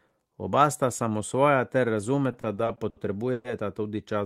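From 2.31 to 3.47 s, late packets repeatedly emptied the jitter buffer, causing repeated stalls (stutter): seven stretched pauses, up to 120 ms, make the speech drag and stutter.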